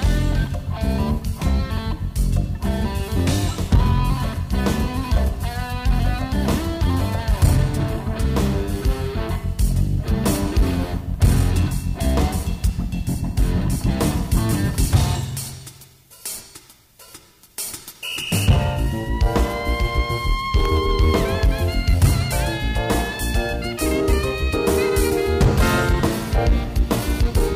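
A short burst of processor overload crackle tears through the sound from 20.60 to 20.77 s. Across that 0.17 s stretch, a handful of tiny buffers, each well under a millisecond long, missed their deadline and dropped to silence, giving a gritty crackle that stops once the load eases. On a waveform these show as brief flat gaps with abrupt edges; a spectrogram shows thin vertical broadband streaks clustered in that window.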